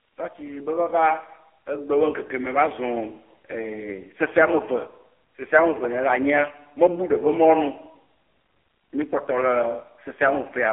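From start to finish, the speech carries the sound of an AMR narrowband mobile codec. Nothing passes above about 3.4 kHz, and the low end thins out below 300 Hz, like a phone line. The codec rebuilds each voice from a vocal-tract model fed by sparse pulses. Here the damage is heavy. The voice turns buzzy and synthetic, with a robotic edge. That roughness fits one of AMR-NB's low modes, near 5.9 kbps.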